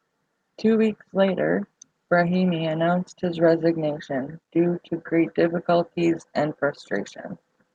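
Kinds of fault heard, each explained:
No faults can be heard in this speech clip. It has gone through a WebRTC call path that is working as intended, and its highs stop at about 12 kHz under the codec's normal coding noise, which fits Opus at a moderate bitrate.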